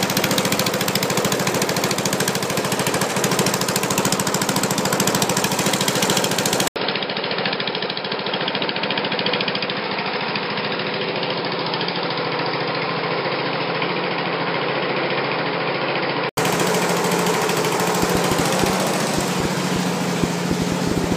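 At 6.68 s the recording system most likely switched its input to a poorer device. After a gap of about 80 ms, the sound comes back through a narrower channel with nothing above 5.2 kHz. The level drops by roughly 5 dB and a new background noise sits around 30 dB below the signal. The result is dull and boxy, with added background noise. At 16.37 s the original input returns and the sound opens up again.

From 18.03 s to 21.13 s, a train of clicks is laid over the audio, likely from electrical interference or a faulty connection. There are around twenty similar pulses, about 5.75 per second on average but unevenly spaced. They peak some 15 dB above the signal, so the audio carries a loud, irregular ticking and popping that continues through the quieter moments.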